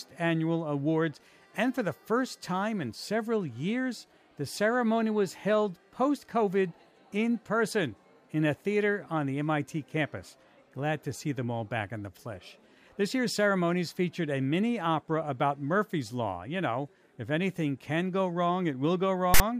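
At 19.34 s a burst of harsh static cuts in and stops abruptly at 19.40 s, just before the end. This is file tags played as audio. A block of text tags stored in the file was read by the player as if it were sample data. Text bytes make a loud rasp shifted off centre. The burst lasts about 60 ms. Its edges are hard, with no fade in or out.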